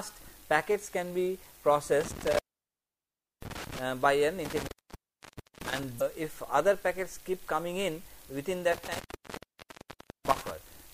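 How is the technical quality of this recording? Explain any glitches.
The recording has two kinds of fault: repeated signal dropouts from an intermittent contact, and one brief decoding glitch.

Intermittent contact occurs three times: from 2.01 to 3.81 s, 4.45 to 5.83 s, and 8.72 to 10.51 s. Each time, a loose connection in the cable or plug breaks the signal path. The audio drops away with crackle at the break and again when the contact remakes. The line stays open for about 1.04 s, 0.94 s and 1.26 s respectively, and leaves faint residual hiss.

Damaged data in a compressed stream appears from 5.97 to 6.02 s, just after the second dropout. Corrupted bytes in the encoded stream cause the decoder to misread those frames and lose sync while it hunts for the next valid frame header. The result is a short chirp or blip lasting about 44 ms.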